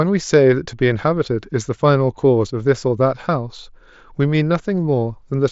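No technical faults can be heard anywhere in the speech. It arrives over a Bluetooth mSBC headset link, so nothing sits above about 7.7 kHz and the louder moments carry a light grain from the codec.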